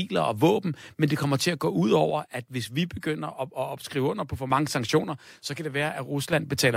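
A speech clip whose level falls abruptly by about 6 dB twice: first from 2.11 s, right after "til at gå ud", until 4.51 s, and again from 5.04 s to 6.33 s, with the level snapping back up at each end. The likely cause is one channel dropping out of a stereo recording: once the two sides are summed to mono, only half the shared signal remains, so the drop is exactly that size while it lasts.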